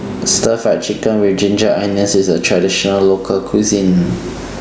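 Speech throughout shows gain pumping: the level ducks under each loud syllable, a level swing of around 20 dB. Unlike a noise gate, which cuts the pauses to near silence, here loud and soft passages end up squashed close together. The likely cause is input gain set far too high, with a fast limiter clamping each peak. The room noise sits about 33 dB below the speech.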